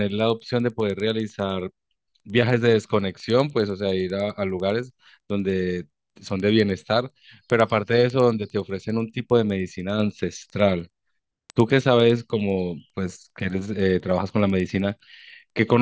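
Throughout, the resampler restarted on every block, converting 48 kHz to 16 kHz in 100 ms chunks without carrying neighbouring samples across block edges. Each edge picks up a small error, heard as regular ticks at 10 per second riding on the speech.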